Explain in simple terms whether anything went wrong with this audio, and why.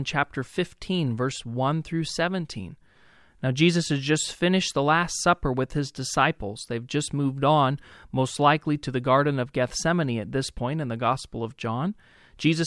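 Nothing went wrong here: listening through the speech turns up no technical fault at any point.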